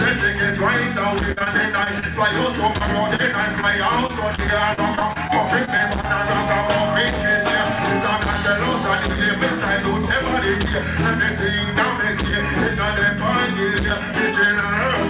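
From 1.32 to 2.04 s, and again from 2.78 to 6.05 s, the audio turns choppy and robotic, with short stutters and brief holes. This is repeated packet loss (robotic sound): packets kept arriving late or not at all, and each gap, none longer than about 47 ms, was patched by stretching the preceding sound before the next loss hit. The first stretch is the denser of the two. Throughout, the narrowband sound with nothing above 4 kHz points to a G.711-style call codec.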